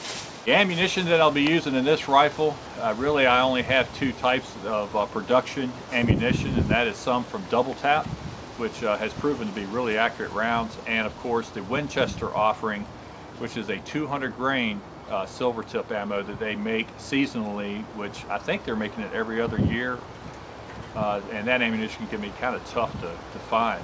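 The audio has passed through a call path with content ending at 8 kHz, which fits G.722 at 64 kbps. At 0.46 to 0.48 s there is a skip ahead. About 0.7 s of audio was dropped while later audio was already queued, and playback jumps straight across with no gap. Two jitter buffer speed-ups follow, at 0.72 to 1.82 s and 2.44 to 2.96 s. The receiver trimmed short pitch-period pieces, roughly 70 ms in each stretch, to shed excess delay. Pitch stays the same, but the pace quickens by 6% and then 11%, sounding hurried.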